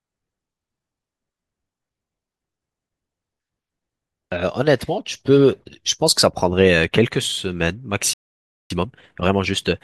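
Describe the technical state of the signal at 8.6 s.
At 8.6 s the speech has dropped into dead silence, partway through a playback stall running from 8.13 to 8.70 s, a gap of about 0.57 s before the sound resumes. The likely cause is the player running short of data or its thread being held up, so output halts until it recovers.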